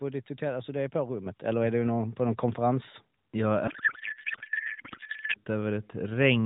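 A speech recording carried over narrowband AMR, with nothing above 4 kHz, and it has two faults. At 1.26 s the microphone volume steps up. The level jumps by about 7 dB in one step, between "alltså det är på" and "eller är du någon". Voice and background rise together. That points to the call software judging the input too quiet and raising the device gain at once, not to the talker getting louder. From 3.68 s to 5.37 s the codec payload is misread. The speech gives way to garbled noise and warble that barely tracks it. The sound fits AMR frames packed octet-aligned but unpacked as bandwidth-efficient. The decoder still gets valid-looking frames. But every field is shifted, so it rebuilds nonsense. Clean decoding returns at 5.37 s, once both ends agree on the packing again.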